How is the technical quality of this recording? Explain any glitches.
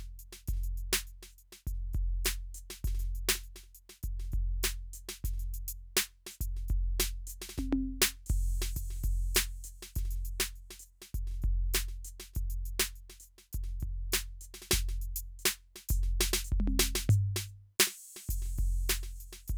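No faults detected: the music runs without dropouts, clicks, distortion or timing errors.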